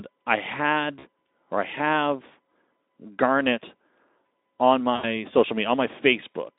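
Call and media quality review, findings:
VoIP packet loss concealed by the speech codec: brief smeared dropouts at 0.99–1.04 s, just before "or I have", and 4.95–5.05 s. The Speex decoder stretches its last frame and fades it, about 40 ms and 80 ms.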